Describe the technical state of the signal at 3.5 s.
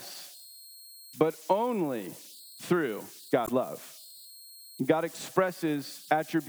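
Right after "but only through", from 3.44 to 3.49 s, there is damaged data in the compressed stream. Some bytes in that stretch were corrupted or lost. The decoder could not read those frames correctly and lost sync. It then had to hunt for the next valid frame header before playback resumed. The result is a brief chirp or squawk lasting about 50 ms.

Converter idle tones are also present at this moment, as they are for the whole clip. The delta-sigma converter had no dither. With a small input it fell into repeating bit patterns. Those patterns produce a tone around 4 kHz, about 22 dB below the signal. It sounds like a thin whistle in the gaps and a grainy edge under the quieter speech.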